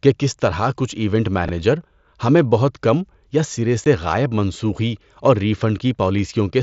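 At 1.45 s, chunks out of order disrupt the speech for about 40 ms, until 1.49 s. A 10 ms block of audio arrived late. It played three blocks after its proper place. Nothing is missing, but the sequence is scrambled. That leaves three hard joins where unrelated waveforms meet. Each join can click. The result is a brief jumbled smear, too short to follow.

At 3.84 s there is unconcealed Bluetooth headset packet loss. About 15 ms of speech drops out between the headset and the phone. The gap points to a couple of lost packets. Nothing was generated to cover the loss, so silence or an idle pattern fills it. The hole has abrupt edges on both sides. It is heard as a short hole in the speech, passing through the same wideband mSBC path as the rest of the audio.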